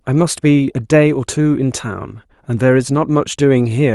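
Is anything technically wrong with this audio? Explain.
No, nothing is technically wrong with this audio.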